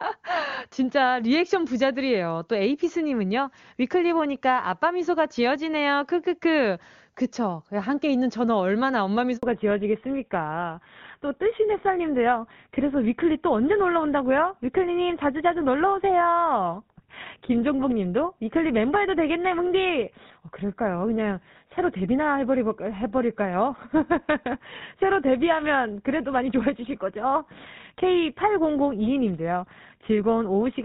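At 9.37 s there's a handover gap: the call got passed between networks and no frames came through for about 60 ms, so the audio just cuts out briefly until 9.43 s, when the new link picks up and carries on.

Right after that, from 9.43 s to the end, there's a fallback to narrowband. Before the switch, the wideband HD Voice codec sounds clear. That fits a high AMR-WB rate. After the switch, nothing above 4 kHz survives, so the speech turns duller and rougher, the way an older GSM full-rate link sounds.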